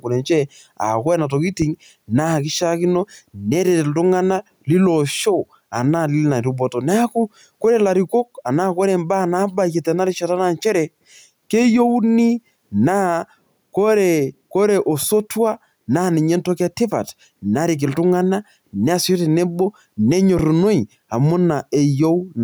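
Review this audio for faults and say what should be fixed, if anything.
There's gain pumping through the whole clip: the level ducks by roughly 5 dB whenever the speech gets loud, so everything sounds squashed. That's likely input gain set way too hot with a fast limiter clamping down. Drop the preamp gain and ease off the limiter.

There are two phantom power thumps, a short one at 1.62 to 1.70 s that dies away in about 18 ms, and a longer one at 20.39 to 20.74 s with about a 78 ms decay. Each is a low thud from a supply switching on a live input. Mute the channel before touching phantom power.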